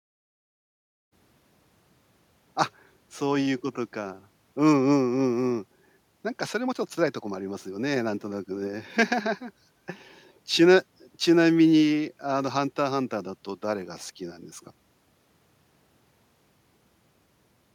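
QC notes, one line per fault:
Nothing to flag in this speech clip; the gentle fade-in that finishes at about 1.15 s is a deliberate edit, not a problem.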